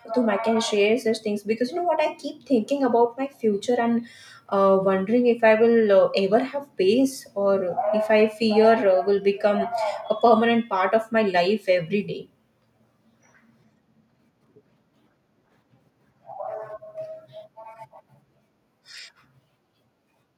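No technical faults are audible.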